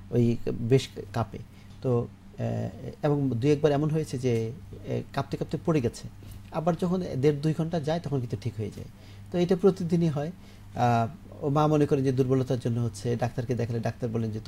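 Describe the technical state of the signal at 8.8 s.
At 8.8 s the signal is intact, with no dropout, distortion, noise burst or other fault audible at that moment.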